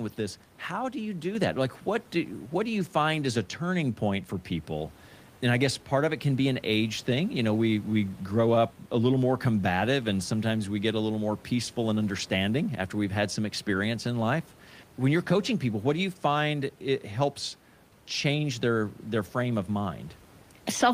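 Right after "how do you do", at 1.35 s, the microphone volume is stepped up: the call software judged the mic too quiet and raised its input gain by about 6 dB at once, so the speech and the faint room noise jump louder together.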